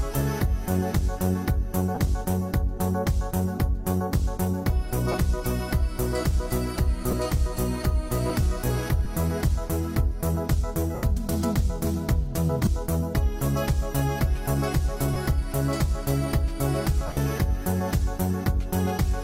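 Lost LE Audio frames cause brief gaps of about 20 ms at 1.95, 5.12, 7.11, 9.04, 12.65 and 15.14 s, with longer 80 ms losses at 10.95 s and at 17.07 s. The last one is scattered over 100 ms, with its longest run around 40 ms. The gap lengths suggest two or eight 10 ms frames each time. The LC3 decoder fills each loss by repeating the last spectrum with random signs, so tones become a short noisy smear rather than a click or hard dropout.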